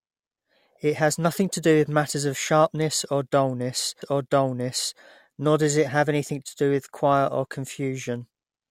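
At 4.02 s, right after "of sharpness or dullness", a stream segment is repeated. The player fetched or queued the same chunk of speech twice. Just under a second, 0.99 s, plays again until 5.01 s, with a small blip at the jump back. Then "nor does it have" follows.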